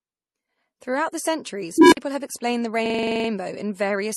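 A short speech recording carries three technical faults. Throughout, the sound has a layered, smeared quality in which one codec's artefacts sit on top of another's: pre-echo and swirly high-frequency smearing combined with the duller, band-limited character of a second encoder. This is likely transcoding between lossy codecs, a chain that fits AAC-LC at 48 kbit/s, then MP3 at 64 kbit/s, then AAC-LC again. It differs from a single low-bitrate encode because the artefacts are of mixed kinds rather than one consistent signature. From 1.78 to 1.97 s an unstable filter takes over. A tone near 300 Hz swells over roughly 144 ms until it clips, then drops into about 51 ms of silence as the filter overflows and resets. That growing pitched tone ending in a gap separates it from feedback howl, which keeps sustaining rather than cutting out. From 2.86 to 3.29 s a system hang loop repeats one 42.67 ms slice exactly ten times, giving a 23.4 Hz machine-gun stutter, which fits a 2048-sample buffer being replayed. 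Little or no audio is lost around it. Unlike a scratched-disc skip or a dropout, the repetition is identical and rigidly periodic.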